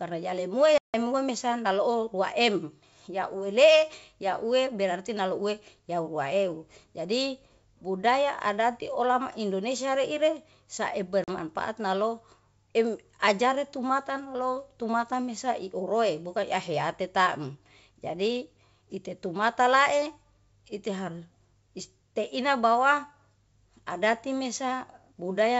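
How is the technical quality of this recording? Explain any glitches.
The speech carries two glitches caused by packet loss on an ADPCM call, heard over wideband telephone coding with clear upper-band detail that fits G.722 at 64 kbit/s.

From 0.78 to 0.95 s and again from 11.24 to 11.31 s, the sound cuts out into a hard-edged silent gap and comes back slightly distorted. The first gap spans about 160 ms of lost audio, several packets' worth, just before "mesa naloo". The second is a shorter 40 ms loss of a couple of packets, just before "nalo em ajare tumata". The missing packets were filled with silence. Because ADPCM codes only differences from a running prediction, the receiving decoder's predictor and step size drifted out of step with the sender's. The audio therefore resumes slightly distorted until they realign, within some tens of milliseconds.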